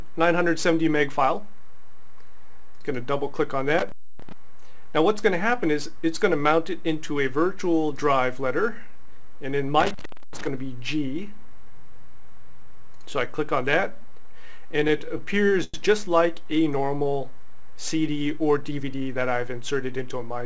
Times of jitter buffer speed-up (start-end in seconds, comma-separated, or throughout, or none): 18.49-19.16